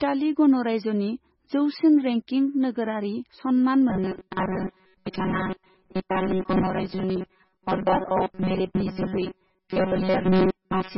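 From the start, the speech carries heavy, watery, swirling damage with nothing above 5.6 kHz, which points to MP3 compression, likely at a very low bitrate around 16 kbps. A spectrogram shows a hard ceiling at 5.6 kHz and weaker components blinking on and off between frames.

From 3.90 s to the end, the speech turns into a rigid, metallic buzz at 188 Hz, robotic sound likely caused by repeated short buffers of about 5.3 ms replacing most of the real audio. The waveform shows short, identical, evenly spaced repeats, and the spectrogram shows harmonics locked to 188 Hz.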